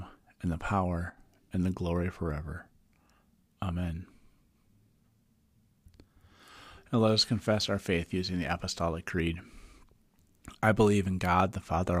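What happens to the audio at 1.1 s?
After "and the", from 1.10 to 1.18 s, the speech dips abruptly by about 6 dB. Likely one channel drops out, weakening the mono sum.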